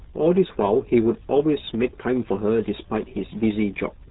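From start to finish the RealAudio 14.4 codec's heavy damage muffles and garbles the speech, cutting everything above 3.8 kHz. Gargly smearing, not mere band-limiting, marks this 8 kbit/s-style coding.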